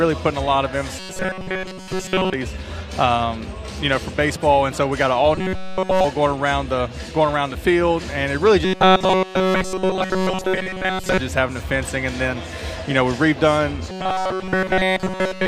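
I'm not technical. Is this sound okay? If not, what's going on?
No. The sound has a robotic sound from repeated short buffers at 0.99–2.34 s, 5.35–6.04 s, 8.65–11.19 s and 13.90–15.48 s. It turns into a stiff metallic buzz pitched at 188 Hz. The likely cause is new audio arriving too slowly, so the player loops a tiny slice of about 5 ms instead.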